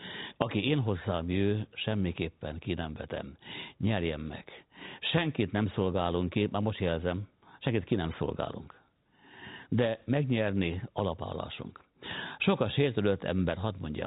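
Telephone-band speech with no audible technical faults.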